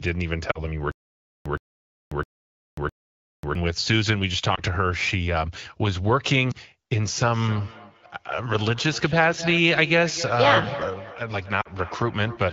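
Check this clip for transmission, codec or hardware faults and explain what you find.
Yes, the clip has three kinds of fault: lost AMR speech frames, a stutter with silent gaps, and feedback echo between two devices. The AMR wideband coding underneath sounds clear, which fits a rate around 12.65 kbit/s.

Lost AMR speech frames occur at 0.51–0.66 s, 4.55–4.60 s, 6.51–6.55 s and 11.61–11.68 s. Frames failed their checksum, so the decoder repeated the last good pitch and vocal tract settings at falling gain. The result is a brief warble or dip, fitting one or two 20 ms frames, not a repeated burst.

The stutter with silent gaps runs from 0.92 to 3.55 s. A fragment of about 0.12 s plays four times, each followed by about 0.54 s of digital silence, for a steady 0.66 s cycle. This is likely a stalled player replaying its last buffer. Unlike frame loss, the audio repeats exactly and drops to true silence.

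Feedback echo between two devices runs from 7.16 s to the end. A second device's loudspeaker is picked up by the other microphone, and neither echo canceller removes it. Speech returns roughly every 0.3 s, at its loudest about 12 dB below the original, thinner and ringing with each pass. Its spacing is set by the acoustic loop, not by player retries.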